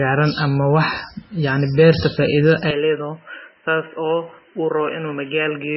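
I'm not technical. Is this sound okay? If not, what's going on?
No, not quite. The whole clip sounds watery and swirly, with the crisp top end missing above about 5.6 kHz. That's most likely heavy MP3 compression, where the file was squeezed so hard that fine detail got thrown away.

Then at about 2.71 s the speech abruptly turns duller and boxier and drops a little in loudness, with nothing left above about 3.1 kHz and no gap at the change. It stays that way to the end, like the input switched to a poorer device partway through.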